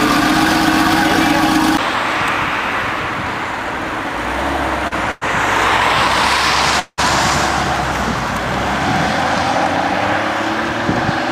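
At 4.87 s the last sound is held about 39 ms too long, with a brief buzz or dip, and then carries on from the same point with nothing lost. This is a short stall from a late packet. The jitter buffer ran empty, so the receiver stretched the final sound until the overdue packet arrived.

From 5.11 to 5.23 s the sound continues as a fading buzz or hiss for about 101 ms. From 6.79 to 7.00 s a similar continuation runs for 183 ms, falling silent for its last 40 ms. After each one the audio resumes exactly where it stopped, so nothing is missing. Both are call audio freezes, likely caused by packets held up in transit that drained the jitter buffer and inserted gaps into the stream.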